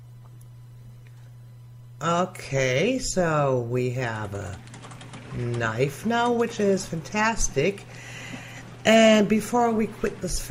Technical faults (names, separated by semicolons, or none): none